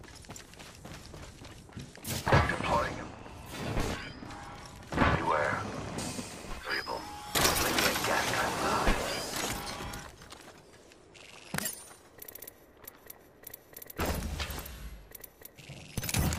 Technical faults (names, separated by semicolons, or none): none